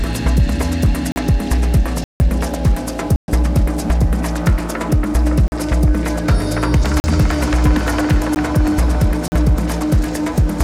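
The playback path repeatedly failed to deliver samples in time, so whole blocks of output came out as zeros, leaving a block of digital silence seven times: 1.12 to 1.16 s, 2.04 to 2.20 s, 3.16 to 3.28 s, 5.48 to 5.52 s, 7.00 to 7.04 s, a 14 ms gap at 8.35 s, and 9.28 to 9.32 s. Each cut is abrupt. The 14 ms gap registers as a tick, while the 160 ms and 120 ms gaps open audible holes in the sound.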